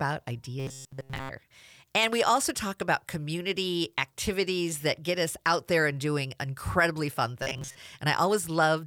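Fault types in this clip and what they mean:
Robotic sound from repeated short buffers: The speech becomes a rigid, metallic buzz at 134 Hz. This likely comes from 7.5 ms chunks being repeated while new audio arrives late.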